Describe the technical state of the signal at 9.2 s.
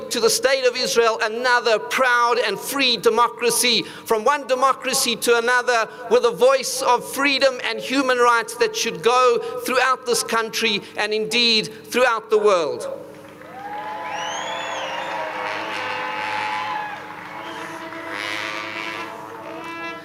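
At 9.2 s the signal shows gain pumping, present across the whole clip rather than at this moment alone. The swing is around 10 dB. Loud and quiet passages sit unnaturally close in level, and the sound feels squashed. The likely cause is input gain set far too high, with a fast limiter or compressor clamping it down on every peak.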